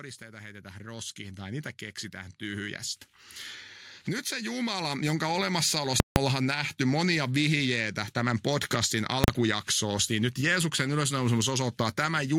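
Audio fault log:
0.18–2.89 s and 4.28–5.51 s, automatic gain rising: the automatic gain control decided the input was too quiet and ramped its gain up, by about 10 dB over roughly 2.7 s the first time, then by about 6 dB over about 1.2 s. Because the gain applies to the whole signal rather than just the speech, the speech and the background noise swell together.
6.0–6.16 s and 9.24–9.28 s, invalid numbers at full scale: a calculation produced infinite or invalid values, which were clamped to the extreme sample value, pinning the output flat at one extreme value, far beyond the audio's peaks, for a 160 ms block and then a 40 ms block. The longer block is heard as a very loud pop at its start and another at its end, with nothing between. The shorter one collapses into a single bang.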